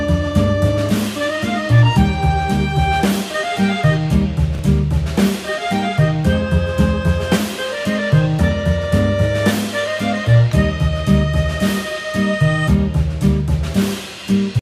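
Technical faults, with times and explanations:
4.55 to 4.59 s, chunks out of order: one 10 ms chunk plays three chunks late, after audio that should follow it. Nothing goes missing, but the sequence is shuffled. There are three hard joins around a brief jumbled blip in the sound.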